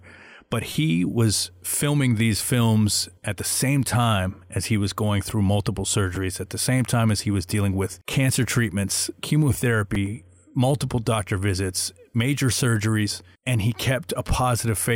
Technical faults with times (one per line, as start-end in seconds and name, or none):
0.73-0.75 repeated buffer
6.15 repeated buffer
9.95 repeated buffer